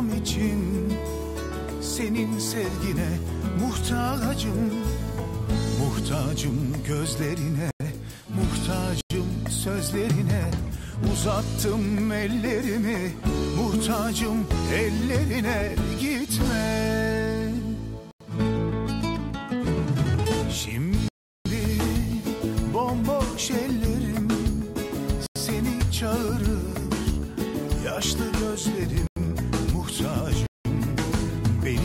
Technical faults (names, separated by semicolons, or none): block of digital silence